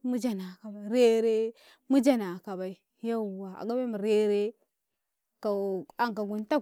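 Nothing in this recording stands out as a technical fault, so there's no problem to point to at any moment.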